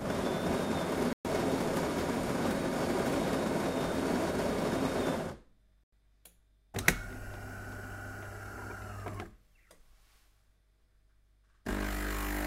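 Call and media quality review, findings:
Audio drops to silence 1.13–1.25 s (about 120 ms gap), then resumes. Bluetooth stall, likely from radio interference holding up packets until the headphone buffer ran dry.

Second dropout 5.84–5.92 s, about 90 ms of silence, same abrupt cut and pickup. Bluetooth stall again: playback likely paused on the headphone side until retransmitted packets arrived.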